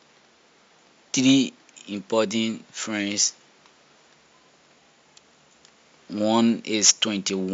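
Speech recording with no audible technical faults.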